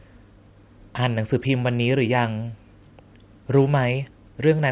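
Nothing's wrong with this bit of speech; it just carries the usual narrow phone-call sound of a call path, with nothing above 4 kHz, which fits a G.711-style telephone codec.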